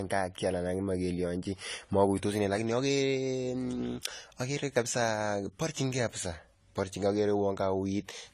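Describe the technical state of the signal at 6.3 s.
At 6.3 s the speech carries plainly audible AAC compression, present throughout the clip rather than at that moment alone. Nothing reaches above 14 kHz, and the top octave sounds dull and smeared, with a warbling, fizzy grain on sustained sounds and sibilants. The likely cause is an AAC-LC encode at a low rate, consistent with about 32 kbps. At that rate the encoder spends too few bits on its frequency lines, lowering the cut-off and leaving sparse, unstable high bands.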